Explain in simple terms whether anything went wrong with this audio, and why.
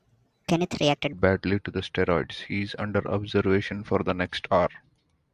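The first 1.13 seconds of speech sound high and rushed. This is a wrong sample rate fault. The audio was played faster than it was recorded, which fits 22 kHz sound played at 32 kHz. Everything runs 1.45 times faster, about six and a half semitones higher.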